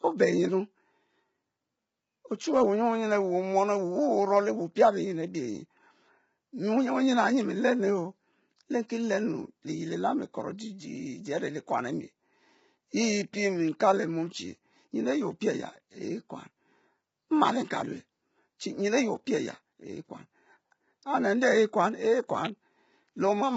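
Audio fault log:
throughout low-delay AAC compression. The speech sounds rough and grainy, with noise between harmonics and nothing above 7.8 kHz. This heavy damage likely comes from a roughly 16 kbps AAC-ELD stream.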